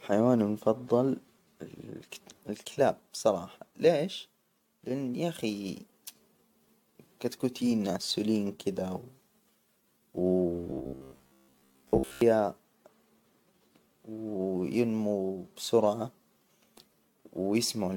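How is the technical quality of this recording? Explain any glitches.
The quality is compromised by two problems, one running through the whole clip and one brief glitch.

Throughout, the speech sounds swirly, hollow and smeared, with soft attacks: generation loss, likely from several rounds of AAC re-encoding, each pass stacking fresh quantisation damage.

From 10.7 to 12.21 s there's robotic sound from repeated short buffers, a rigid metallic buzz near 67 Hz. It's likely caused by starved playback looping roughly 15 ms chunks, which replace most of the real audio there.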